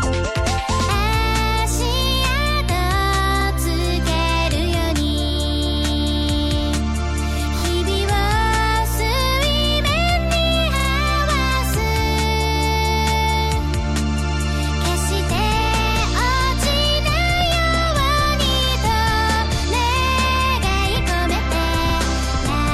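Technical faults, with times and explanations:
3.40 s, 7.58 s, 10.79 s, 21.89 s: repeated frames. A 46 ms block (23 ms at 7.58 s) replays once, twice at 10.79 s, stuttering and lengthening the audio.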